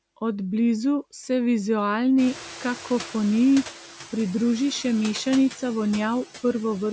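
Across the whole clip there are noise suppressor artifacts. The suppressor works frame by frame, cutting each frequency band it judges to be steady noise by about 4 dB. The background therefore dips in the gaps between phrases and swells back up underneath the speech, so the noise floor pumps in step with the talker rather than sitting still. The band-limited call microphone path, with nothing above 8 kHz, carries this throughout.

Around 2 s the room noise jumps by roughly 19 dB, and from 2.18 to 3.74 s the noise suppressor is catching up. Its noise estimate still reflects the quieter background, so the louder noise first passes with little reduction and then settles as the estimate adapts over about 1.56 s, ending at a cut of about 5 dB. You hear a burst of noise that gradually sinks.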